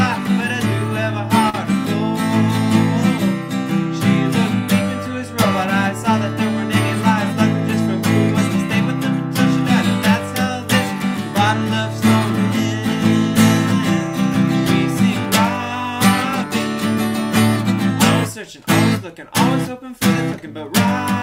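Audio with a short stall from a late packet at about 1.49 to 1.55 s. The jitter buffer ran dry, so 42 ms of sound is stretched and held. Nothing is lost; playback resumes 42 ms later.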